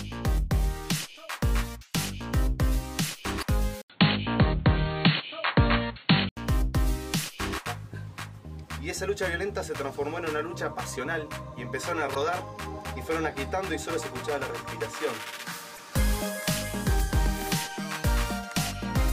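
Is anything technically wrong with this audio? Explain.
Yes. There is damaged data in a compressed stream at 3.38–3.44 s, 12.11–12.17 s and 15.74–15.80 s. Each time the decoder misreads the frames there and loses frame sync.

From 3.82 to 6.37 s the sound turns dull, with nothing above 4.4 kHz, a short silence of about 80 ms at the switch, a level shift of around 5 dB and new background noise roughly 35 dB down. The likely cause is the input switched to a poorer device.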